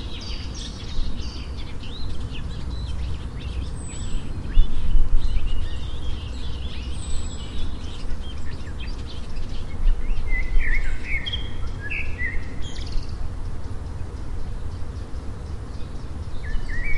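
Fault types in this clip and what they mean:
Compressed frames skipped: five times, whole coded frames of these sounds go unplayed, so the audio leaps ahead by up to about a tenth of a second. Unlike a dropout, no silent gap appears.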